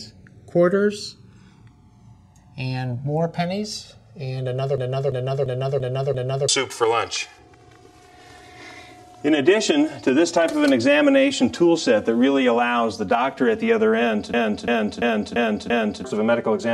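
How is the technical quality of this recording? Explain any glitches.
The recording has two problems. A slow flanging runs through the whole clip, and the sound twice locks into a short repeating loop.

Channels drifting apart is present throughout. The clip was made from two channels recorded on devices with separate clocks. Their clocks differ by a few hundred parts per million. So the delay between the channels slowly grows, reaching roughly 5 ms by the end. Summed to mono, this creates comb notches that sweep slowly through the spectrum. You hear it as a slow flanging swirl.

A system hang loop occurs twice: from 4.78 to 6.49 s, and from 14.34 to 16.04 s. The computer or driver froze. The sound hardware kept cycling through the same buffer. A 341 ms piece of audio repeats exactly, five times, at 2.93 Hz. That length fits a 16384-sample buffer. It sounds like a skipping record. Around a second and a half of real audio is lost each time.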